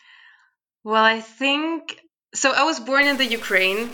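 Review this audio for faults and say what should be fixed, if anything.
A likely stuck bit, near -35 dBFS in weight, corrupts the speech from 3.03 s to 3.94 s, right after "think so I was", adding harsh, buzzy distortion. Check the converter and digital data lines for broken or shorted connections, and test bit integrity with a full-scale ramp signal.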